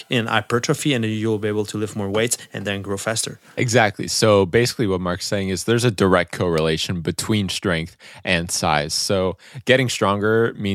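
Right from the start, 0.0 to 2.0 s, there's USB whine: a steady, fixed-pitch tone built on 1 kHz, with its third harmonic at 3 kHz the loudest part. That 1 kHz spacing points to the bus's 1 ms frame timing bleeding into the power or ground. It sits faint, roughly 45 dB under the speech, as a thin high whistle, and it's gone by "weights and then grow".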